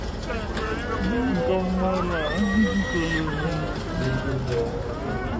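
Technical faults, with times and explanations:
Throughout, wrong sample rate: everything runs at two-thirds speed and sits about 7 semitones lower, which fits 24 kHz material played back at 16 kHz without conversion. Pitch and tempo drop together by the same ratio, unlike a time-stretch, which slows audio but keeps pitch.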